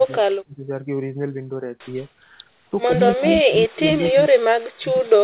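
Speech suppressed in double talk appears at 0.0 to 0.04 s as a shallow dip of about 10 dB, then at 0.2 to 0.65 s, where the speech is pushed down by about 35 dB and nearly vanishes. Both far and near talkers were active at once, and the echo canceller likely could not tell this voice from loudspeaker echo, so it attenuated everything.

An echo leak follows at 2.01 to 2.06 s: a faint copy of the voice, about 40 dB below it and trailing by 126 ms, is likely residual loudspeaker sound the far side's canceller failed to remove and sent back.

Double-talk suppression returns at 2.87 to 2.99 s as a slight dip of about 5 dB, at 3.15 to 3.25 s as a near cut of about 30 dB, and from 3.43 s to the end, where the voice drops by up to about 40 dB.

Inside that stretch, at 3.94 to 4.12 s, a second echo leak is much louder, about 20 dB below the speech, arriving 130 ms late. It is a trailing copy, band-limited like everything else on this G.711 call path to nothing above 4 kHz.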